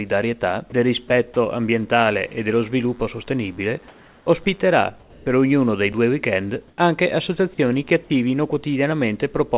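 Sound dropped by the voice detector appears as four very short gaps at 0.70, 1.08, 1.34 and 4.44 s. Each is about 20 ms in which the audio gives way to a flat, steady hiss before the signal returns. The likely cause is a sender-side voice detector that briefly judged low-level material to be background, stopped transmitting, and left the receiver to fill the hole with synthetic noise until the detector re-triggered. Comfort noise in place of the background covers three pauses: 3.88 to 4.26 s, 5.00 to 5.26 s, and 6.68 to 6.78 s. In each, the real ambience, sitting roughly 31 to 32 dB below the loudest passages, is swapped for smooth, featureless noise. Its level barely shifts (unchanged in the first, about 2 dB up in the second, about 1 dB down in the third), so the giveaway is the loss of texture rather than loudness. This points to discontinuous transmission, where the sender goes quiet during pauses and the receiver synthesises a stand-in background. 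Audio missing between chunks shows up once, at 5.93 s, as a tiny skip of a few milliseconds where two stretches of sound are butted together with no silence between them. The likely cause is a recorder or processor working in fixed blocks and dropping a sliver at a block boundary, which would fit 3-second chunks. Throughout, the band stops at 4 kHz, consistent with a narrowband G.711 call path.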